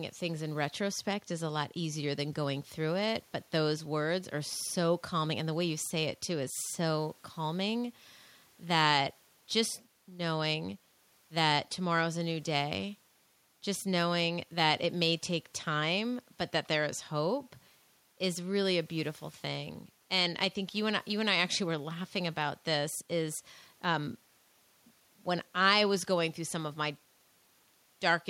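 Speech recording, with nothing technically wrong to report at any point.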